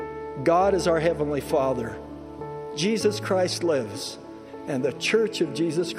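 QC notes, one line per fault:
No faults heard on the clip's playback path.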